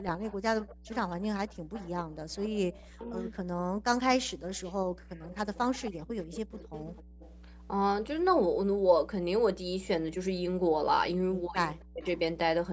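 A speech recording carries a steady mains hum at 60 Hz, loud at roughly 10 dB below the speech, present from start to finish with low harmonics. Unlike rumble or traffic noise, it holds a fixed pitch and level, pointing to a ground loop or nearby transformer feeding the power line into the signal. Over that runs echo leak: a faint copy of the voice trailing it by 263 ms, about 20 to 30 dB down, from 0.0 to 1.16 s, 1.48 to 3.3 s, 4.57 to 4.73 s, 5.14 to 7.68 s and 11.51 to 12.07 s. The fixed delay sets it apart from room reverberation, and it likely comes from a far end playing the call on a loudspeaker whose echo canceller let part of it through. Speech suppressed in double talk appears as sudden dips in the talker's own voice, at 2.96 to 3.04 s (about 70 ms, roughly 25 dB deep) and 11.91 to 12.05 s (about 150 ms, nearly 40 dB deep), both landing inside echo passages. That overlap marks it off from a plain dropout, and it likely reflects the canceller turning everything down when both sides spoke at once. 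Separately, background gated by the echo canceller removes the room sound from 7.04 to 7.19 s, dropping it about 28 dB for roughly 150 ms before it returns. Here the ambience rather than the voice vanishes, because the canceller clamped the microphone while the loudspeaker played. The band stops at 8 kHz.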